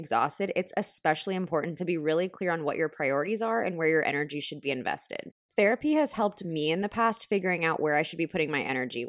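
No technical faults can be heard anywhere in this speech recording. There is nothing here that needs a timestamp or a closer look.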